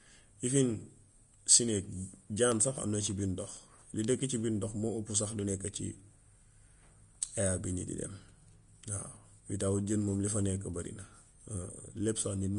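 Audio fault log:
Throughout, likely Vorbis compression: the speech has nothing above 10.5 kHz, and its upper range sounds hissy and grainy, with roughened tones and blurred attacks. Coarse treble quantisation has replaced fine detail with similar-energy noise, damage that fits a bitrate around 36 kbps.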